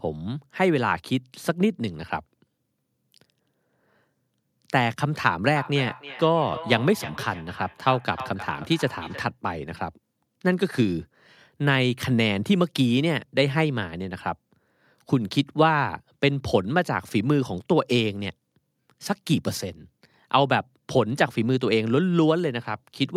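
Feedback echo between two devices runs from 5.55 to 9.35 s: a second device nearby replays this microphone's signal, which is picked up again beyond the reach of either echo canceller. The speech returns roughly every third of a second, thinner and ringing, peaking about 15 dB below the speech.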